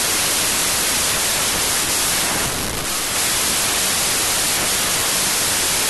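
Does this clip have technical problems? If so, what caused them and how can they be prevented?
Yes. Throughout, the speech has a wrong sample width fault: the slowdown fits packed 24-bit samples being read as 16-bit. Mismatched byte pairs produce loud noise burying the speech, playing at 0.667 times speed with pitch lowered by the same ratio. Prevent it by reading the sample width from the file header and checking it against the decoder's setting.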